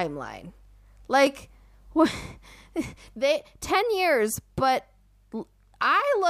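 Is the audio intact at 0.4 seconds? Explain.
Yes, the audio is intact at 0.4 seconds, with no audible fault at that moment.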